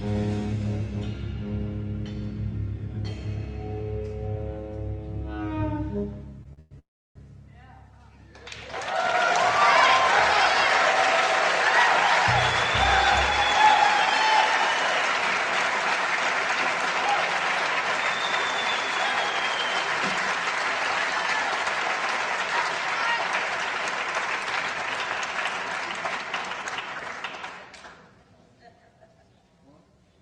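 Repeated stalls (stutter) occur from 6.43 to 6.73 s. Packets reached the receiver late or too slowly, so its jitter buffer ran dry three times in quick succession. Each time, the receiver extended the last stretch of sound to cover the wait. Together those fills add 175 ms, about 59% of that span, and the longest is 115 ms. Nothing is lost, but the audio catches and drags in a halting stutter.

Straight after, from 6.79 to 7.17 s, comes a call audio freeze. The sound stops and is bridged for 365 ms, of which 330 ms is silence, before it resumes from exactly where it left off. The likely cause is packets held up in transit so that the jitter buffer emptied and the receiver had to wait. The result is an inserted gap, a 365 ms added delay rather than missing audio.

Jitter buffer speed-up runs from 21.65 to 26.88 s and again from 28.93 to 29.73 s. Having accumulated more audio than it targets, the receiver trimmed many tiny pitch-period-length slices to bring its delay back down, so pitch stays put while pace rises. 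The first stretch runs at 104% and sheds roughly a fifth of a second. The second reaches 116% and sheds roughly 150 ms, which is clearly hurried. Throughout, the Opus call path limits the band to about 12 kHz.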